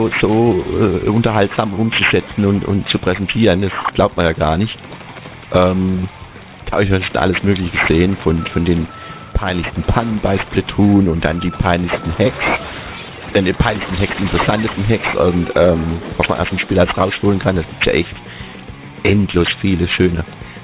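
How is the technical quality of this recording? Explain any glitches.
The technical quality is compromised by one fault across the whole recording: aliasing, from start to finish. The audio sounds like it was downsampled without an anti-aliasing filter, fitting a drop to about an 8 kHz rate. Content above 4 kHz folds back below that edge as unrelated tones, sitting only around 10 dB under the wanted sound, so bright detail turns gritty and metallic and the spectrum runs hard up to 4 kHz.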